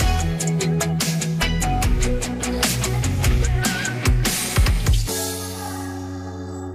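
No technical fault can be heard anywhere in the audio. Nothing in the signal calls for comment at any point.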